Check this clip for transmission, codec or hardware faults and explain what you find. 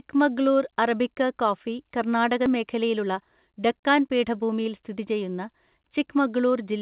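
Two faults are audible in this speech clip. The sound reaches us through a call path whose output stops at 4 kHz, which fits a G.711 mu-law codec at 64 kbps.

The first fault is a skip ahead at 2.46 to 2.48 s. About a second of speech is missing. Later audio was already queued, so the stretch in between was dropped and playback jumped forward. Nothing fills the gap. The two sides meet almost directly, so the speech lurches abruptly across the join.

The second fault is a jitter buffer speed-up from 2.56 to 5.01 s. After the jump, the buffer still held more audio than its target. The receiver trimmed many short pieces, each one or a few pitch periods long. In total it removed roughly a fifth of a second. The speech runs at about 109 percent of normal speed. Pitch stays the same, but delivery sounds hurried until it settles.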